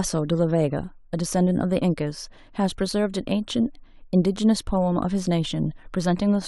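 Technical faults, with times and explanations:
Nothing stood out on listening to this speech recording.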